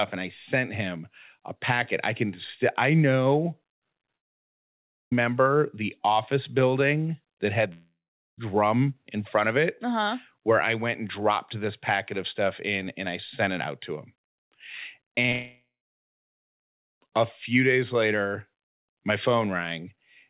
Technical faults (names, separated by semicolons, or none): long network dropout; repeated packet loss (robotic sound)